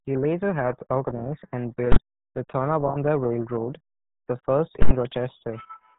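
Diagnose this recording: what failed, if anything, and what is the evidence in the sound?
The codec stage failed. The RealAudio 14.4 codec, running at 8 kbit/s, leaves heavy damage: the speech sounds muffled and gargly, with nothing above 3.8 kHz. On a spectrogram there is a hard ceiling at 3.8 kHz, with smeared harmonics below it.

Invalid numbers at full scale occur at two points, from a processing or sample-format stage. One runs from 1.92 to 1.96 s, after "later helped organize and", and fits a 2048-sample block. The other runs from 4.82 to 4.91 s, after "the first", and fits a 4096-sample block. In each, a calculation produced infinite or invalid values that were pinned to the maximum. The waveform shows a flat rail at one extreme value, far beyond the speech peaks, heard as a loud pop at each edge with silence between.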